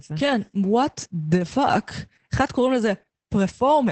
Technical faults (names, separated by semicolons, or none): Opus voice compression